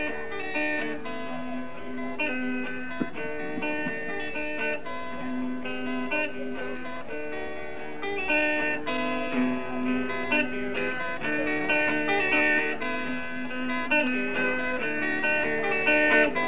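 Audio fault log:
No faults detected anywhere in the clip.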